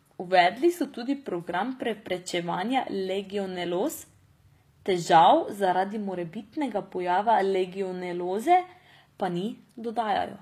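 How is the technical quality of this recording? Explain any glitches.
The recording carries plainly audible codec damage from start to finish. HE-AAC compression, throughout: the treble is likely rebuilt by spectral band replication, copied up from lower bands rather than coded, which fits a bitrate around 24 kbps. Sibilants sound gritty and metallic, with upper harmonics that don't match the lower ones.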